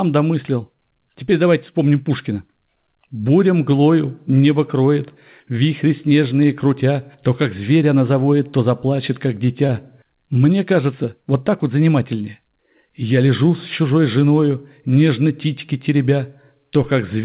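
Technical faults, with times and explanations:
9.67 to 9.75 s, short stall from a late packet: a packet arrived late, so the jitter buffer ran dry and the receiver stretched the preceding sound by about 22 ms before resuming where it left off. Nothing is lost, but the sound is held too long and everything after it lands about 22 ms later. On a spectrogram the harmonics run flat and repeated for that span. On the waveform a short stretch of near-identical cycles repeats. Above 4 kHz the spectrogram is empty throughout, consistent with a narrowband call codec.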